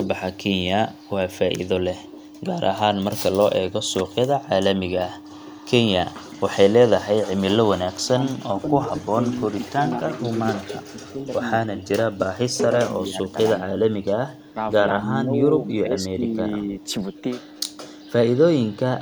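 At 0.33 to 0.37 s, 0.91 to 1.11 s and 2.04 to 2.41 s, a faint delayed copy of the speech appears. This is echo leak. It trails the speech by 196 ms each time. It sits far below the main signal, about 40 dB down in the first and third scraps and about 35 dB down in the second. The likely cause is a loudspeaker at the far end whose echo canceller let part of the pickup through and sent it back.

From 7.99 to 11.28 s, 11.65 to 12.41 s, 12.76 to 14.06 s and 15.01 to 16.72 s, the speech dips and breaks up in pieces. This is speech suppressed in double talk. It likely comes from both sides talking at once, so the echo canceller turned down the wanted speech along with the echo. The deepest drops reach about 20 dB in the first three stretches and about 15 dB in the last. About two seconds are affected in the first stretch, under half a second in the second, and roughly a second in each of the last two.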